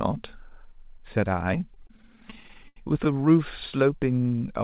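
Repeated stalls (stutter) run from 1.74 to 3.07 s in this speech clip: the jitter buffer kept running dry as packets arrived late. The receiver stretched the last sound across about twenty short waits, the longest 80 ms, so nothing drops out but the speech drags and stutters. Everything above 4 kHz is absent, which fits a G.711 telephone codec.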